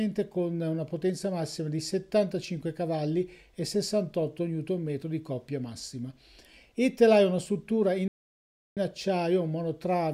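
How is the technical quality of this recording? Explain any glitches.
One glitch stands out: a playback stall from 8.08 to 8.77 s. The player likely ran short of buffered data or had its output thread blocked, so nothing reached the output for about 0.69 s. The sound stops abruptly mid-flow, leaves a clear silent gap, then carries on.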